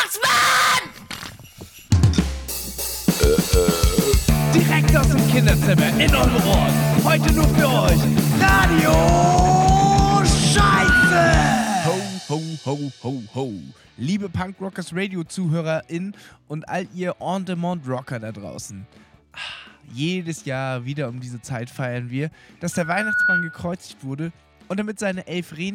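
Loudspeaker feedback squeal appears at 10.60 to 11.34 s and again at 22.72 to 23.68 s: a steady 1.5 kHz tone that swells out of the sound, in about a third of a second the first time and about half a second the second, peaking a little above the program level and then roughly level with it. The microphone is hearing its own loudspeaker, and at 1.5 kHz the loop gain tops one, so that frequency feeds itself until the loop is broken.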